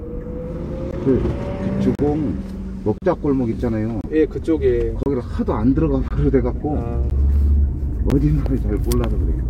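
Gaps between stream segments cut hard-edged silences, roughly once per second, at 0.91, 1.95–1.99, 2.98–3.02, 4.01–4.04, 5.03–5.06, 6.08–6.11, 7.10 and 8.10 s. Each lasts about 12 to 39 ms, inserted where segment timestamps fail to meet. Unlike dropouts, nothing is missing.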